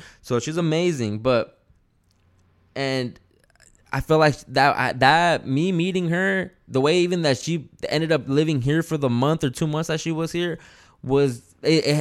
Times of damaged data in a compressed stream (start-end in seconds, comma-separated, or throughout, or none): none